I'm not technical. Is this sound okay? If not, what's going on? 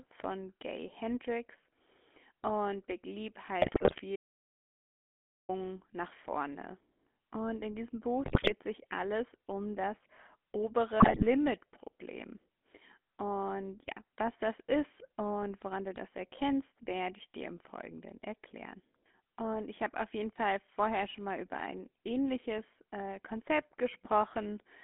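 No. The whole recording went through the old GSM full-rate codec used by early mobile phones. That makes the speech sound buzzy and gravelly, with the high sounds cut away.

There are also GSM bit errors, where damaged data reached the phone's decoder. Brief squawks and gargling appear at 3.62 to 4.01 s, at 8.24 to 8.53 s just before "sich alles um das", and at 11.0 to 11.28 s.

Then there is an audio dropout to silence from 4.16 to 5.49 s. For about 1.3 seconds the sound stops completely and returns at "nach vorne". This was likely caused by a lost connection, and whatever was said during that gap is gone.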